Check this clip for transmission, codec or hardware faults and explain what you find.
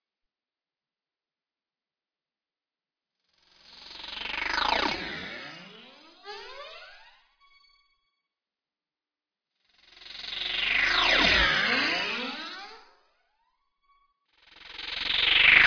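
Nothing here gives any cause for concern; the sounds come across steady and intact, with no sign of trouble from the transmission path, the codec or the hardware.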